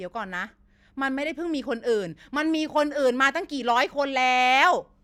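No technical faults can be heard anywhere in this recording.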